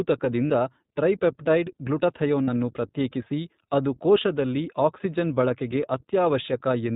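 iLBC codec coding runs through the whole speech clip. Nothing above 4 kHz survives, and the voice carries a plainly audible rough, synthetic edge. The sound points to the 15.2 kbps mode with 20 ms frames, each frame's excitation coded independently of the last.

Lost iLBC frames occur at 0.47–0.51 s, at 2.44–2.49 s just before "ಪ್ರತ್ಯೇಕಿಸಿ ಅದು", and at 4.22–4.24 s just after "ಪ್ರತ್ಯೇಕಿಸಿ ಅದು". The decoder fills each gap by repeating the last pitch cycle with added noise, heard as a brief buzzy, held vowel. The first two fit two missing 20 ms frames, the third one frame. The voice recovers almost immediately afterwards.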